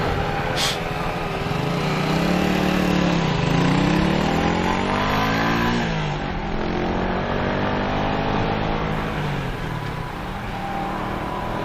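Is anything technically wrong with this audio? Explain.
Yes. From 2.92 to 8.92 s an adaptive stream at a lower bitrate cuts in abruptly with no gap: swirly codec artefacts rise, consistent with a drop from roughly 128 to 48 kbit/s MP3.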